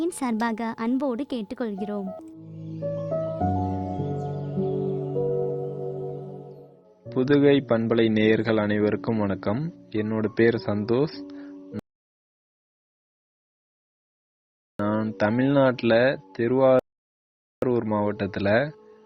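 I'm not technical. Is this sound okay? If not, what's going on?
No. Rebuffering stalls at 11.79 to 14.79 s and 16.79 to 17.62 s: playback ran out of downloaded audio, went silent for 3 s and 0.83 s, then resumed exactly where it stopped.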